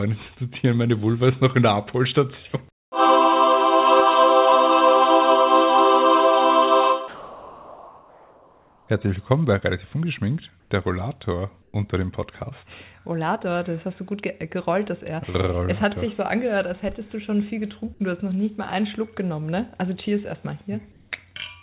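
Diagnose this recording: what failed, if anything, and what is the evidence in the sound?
Four short gaps in the background, at 2.72–2.92 s, 10.6–10.7 s, 11.62–11.74 s and 20.92–21.12 s, lose their texture and become a flat, featureless hiss. The first drops about 18 dB, the last rises about 3 dB, and the two middle ones shift only slightly. This points to comfort noise in place of the background, likely from discontinuous transmission at the call-processing stage: the sender went quiet and the receiver synthesised shaped noise for the pause.

From 7.08 s to 8.88 s the sound gives way to the same steady synthetic noise for 1.8 s, and roughly 0.7 s of real audio is missing before it returns. This is sound dropped by the voice detector. The sender's activity detector likely mistook quiet material for background and stopped sending, so the receiver filled the gap with comfort noise until the detector triggered again, all within a band that stops at 4 kHz.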